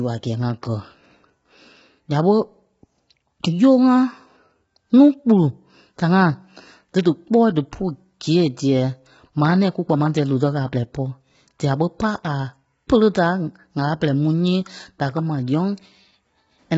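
Low-delay AAC compression, likely from a very low bitrate around 16 kbps, runs through the whole clip. Short frames blur the speech harmonics. The voice sounds rough and grainy, with noise filling the gaps between harmonics. Nothing remains above 7.7 kHz.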